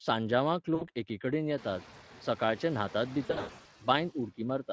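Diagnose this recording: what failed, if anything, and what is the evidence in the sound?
The network stage failed: VoIP packet loss concealed by the speech codec. At 0.75 to 0.88 s, just before "एकेकडेन येतात सकाळचे न्हातात", about 60 ms is lost and the sound smears into a fading buzz. At 3.25 to 3.68 s, after those words, repeated gaps in runs of up to 100 ms leave the decoder extrapolating, and the voice stays weak and distorted.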